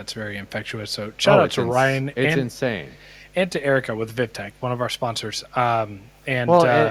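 A mains hum runs through the whole recording: a steady low tone at 50 Hz, sitting roughly 20 dB below the speech, with a few low harmonics above it. Power-line current is getting into the signal through a ground loop or a nearby transformer. It differs from low rumble or handling noise because its pitch and level never move, whether the speaker is talking or pausing.

From 2.53 to 2.59 s, and again from 2.95 to 3.10 s, short scraps of the speech return as a faint repeat about 140 ms behind the original, around 40 dB down. This is echo leak, likely from a far end playing the call on a loudspeaker whose echo canceller did not fully remove that sound from what its microphone picked up, so part of it was sent back. Room reverberation would add a smooth tail after every word. Here each scrap is a separate, delayed copy that appears only briefly.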